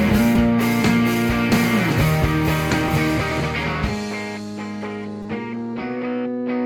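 Music clip with two short repeated-buffer glitches. Around 0.36 s a tiny 5 ms slice plays twice more, and from 5.22 to 5.25 s one loops four extra times, a brief buzz fitting a 5 ms buffer. New audio arrived late, so the device replayed it. Nothing seems lost.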